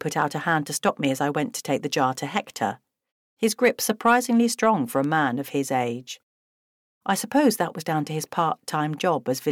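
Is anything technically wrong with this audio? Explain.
Yes. From 0.78 s to 9.31 s there are word clock ticks. They come about once a second, roughly ten in all. Each is a short, sharp click, and some are louder than others. The receiving device is running on its own clock, not locked to the sender's. The two clocks differ by something like 20 ppm. Each time they slip past each other, a single sample is dropped or repeated, and a tick is heard.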